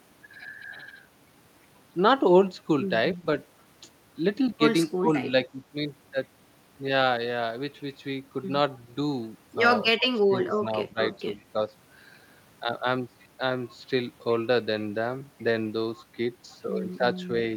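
The speech gets pushed down in four spots: briefly from 3.16 to 3.26 s by around 20 dB, then 4.97 to 5.1 s by about 25 dB, a mild dip of about 5 dB from 5.3 to 5.53 s, and a longer patchy stretch from 9.97 to 10.98 s, down roughly 15 dB. That's likely speech suppressed in double talk, with the echo canceller mistaking overlapping far-end audio for echo and ducking the talker along with it.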